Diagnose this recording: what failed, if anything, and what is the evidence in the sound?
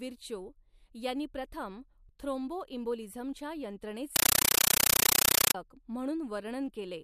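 At the playback stage, a Dolby Digital bitstream on the digital link was passed to the output as ordinary PCM samples instead of being decoded, a compressed stream played as audio. From 4.16 to 5.55 s the speech gives way to very loud, chattering static: bursts of noise about 9.3 ms long separated by silent padding, repeating 31.25 times a second. That frame rhythm fits an AC-3 stream, each packed frame heard as raw noise.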